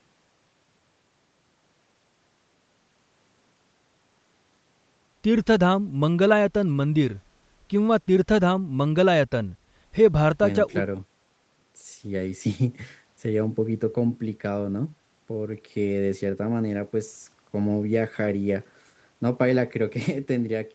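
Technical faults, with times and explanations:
Listening closely to this speech recording, nothing stood out as a technical problem.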